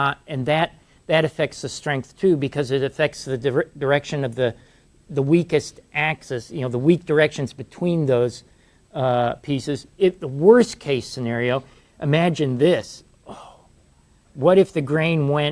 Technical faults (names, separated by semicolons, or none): none